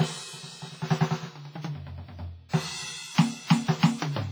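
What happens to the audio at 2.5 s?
A transform codec has spread its quantisation noise over a whole block, and a sharp musical attack near 2.5 s fell late in that block. This is pre-echo. From about 2.49 to 2.53 s, a span of roughly 44 ms, noise scaled for the loud hit also fills the quiet moment before it. The result is a brief hiss leading into the attack, which arrives softened and smeared instead of crisp.

The underlying cause is likely WMA compression at heavy strength. The damage points to a low bitrate, around 24 kbps. Long transform blocks let the noise spread across tens of milliseconds, which is what produces the pre-echo, and weak spectral lines are discarded. Across this moment the music sounds ringing and washy, with a hiss that swells and fades along with the signal.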